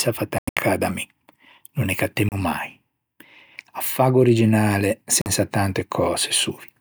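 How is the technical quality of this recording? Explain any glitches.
The speech is interrupted three times by short gaps that sound like Bluetooth dropouts. The likely cause is audio packets reaching the headphones too late and being discarded, which leaves silence until good packets arrive. The first gap runs from 0.38 to 0.62 s, just before "da mi". It is broken into several holes, the longest about 90 ms. The second falls at 2.29 to 2.35 s, after "no ne". The third falls at 5.21 to 5.27 s, after "faggo originale". Each gap has sharp edges or a brief fade of a few milliseconds, and the speech resumes further along, as if it had kept playing.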